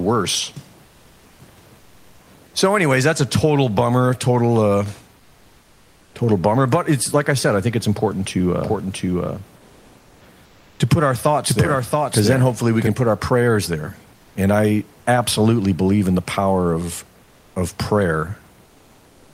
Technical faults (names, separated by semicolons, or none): comfort noise in place of the background; doubled audio track